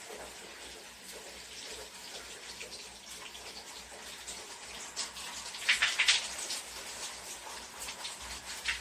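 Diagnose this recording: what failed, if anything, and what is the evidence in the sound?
Nothing failed here, as far as I can hear: the sounds in this recording come through without any break, glitch or added distortion that would point to a problem at any stage of the chain.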